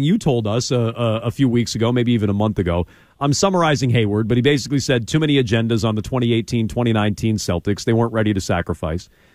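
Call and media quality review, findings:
Nothing to flag on this speech clip; no faults turned up anywhere in the recording.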